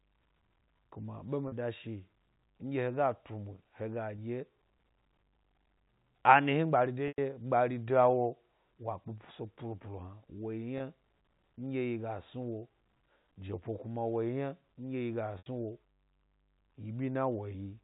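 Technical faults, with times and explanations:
1.48–1.52 s, 4.16–4.18 s, 7.08–7.18 s, 10.78–10.80 s, 15.38–15.46 s: packet loss with pitch repetition. Gaps of 20 to 100 ms are bridged by repeating the last pitch period. The 20 and 40 ms gaps sound briefly held and buzzy. The 100 and 80 ms gaps fade toward silence before speech cross-fades back.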